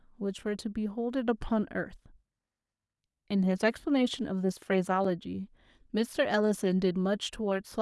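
At 5.05 s the speech drops into a block of digital silence about 5.3 ms long, which fits a 128-sample buffer left unfilled. The signal cuts to zero and back with no fade, and a gap this short is heard as a tick or dip rather than as silence.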